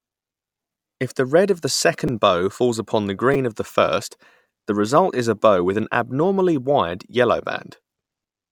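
At 2.08 s and 3.34 s, a repeated buffer: late data made the device replay a tiny segment, fitting a 5 ms buffer, two then three times, heard as brief clicks.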